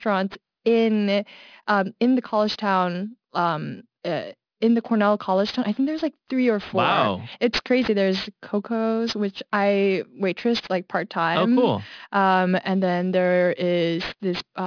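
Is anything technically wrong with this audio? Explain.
Yes. Throughout the speech there is aliasing. The sound points to a drop to a sample rate of 11 kHz without a proper anti-alias filter, so anything above the 5.5 kHz fold point has reflected back down as false tones, sitting roughly 20 dB under the signal. Sibilants come out gritty and metallic, and energy runs right up to the 5.5 kHz edge. That separates it from plain band-limiting, which would only sound dull and muffled, not harsh.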